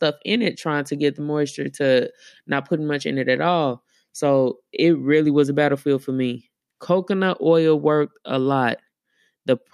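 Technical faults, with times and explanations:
No technical faults are audible anywhere in this speech recording.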